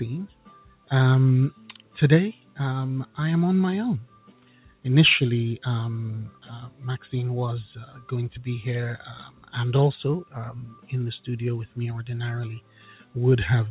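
A noise suppressor tuned for speech is running on this sound the whole way through. It treats anything steady or lingering as noise and pulls it down. Attacks punch through, but held parts and tails keep sinking, so the level swings by around 10 dB and the sound pumps and thins out. That's a noise suppressor applied to music or sounds, not a speech-only signal. Everything sits below 4 kHz, which points to a narrowband G.711-style call path underneath.

You can hear the sound cut by the noise suppressor in specific stretches: 0.28–0.9 s, 1.53–3.18 s, 4.06–4.85 s, 6.31–6.82 s, 7.86–8.1 s, 9.27–9.53 s, 10.25–10.9 s and 12.61–13.16 s. In each one, sustained material gets mistaken for noise and ducked, mostly by about 11 to 12 dB, and only about 8 dB around 7.9 s. The affected portions last from a fraction of a second up to most of a second.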